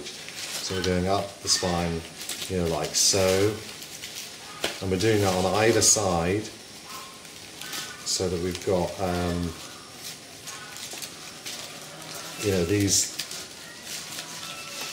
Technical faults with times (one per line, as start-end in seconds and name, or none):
none